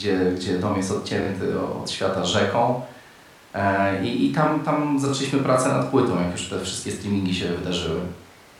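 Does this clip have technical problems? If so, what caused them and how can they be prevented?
Yes. The speech has two short stutters caused by repeated frames, where a piece of compressed audio is decoded and played more than once. At 1.21 to 1.26 s a 24 ms slice sounds three times in a row, adding 48 ms. At 5.08 to 5.10 s a 24 ms slice plays twice, adding 24 ms. Each repeat matches a single codec frame of about 24 ms being resent or rewritten. Checking sequence numbers or timestamps in the transport or file writer, and discarding duplicates before decoding, prevents this.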